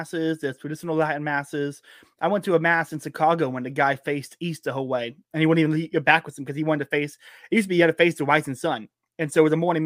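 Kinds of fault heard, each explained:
No technical faults can be heard anywhere in the speech, and the signal stays continuous and steady throughout.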